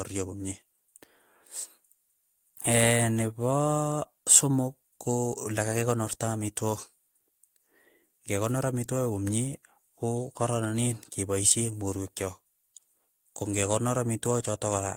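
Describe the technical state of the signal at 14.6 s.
The speech signal at 14.6 s is intact, with no audible fault at that point.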